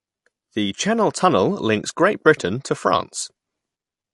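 From start to end the speech has nothing above 11.3 kHz and a plainly audible watery swirl on s sounds, with smeared consonant attacks. This is likely MP3 compression at a low bitrate near 48 kbps. Unlike a simple low-pass filter, weak frequency components flicker on and off between frames.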